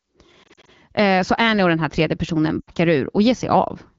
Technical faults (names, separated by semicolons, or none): lost AMR speech frames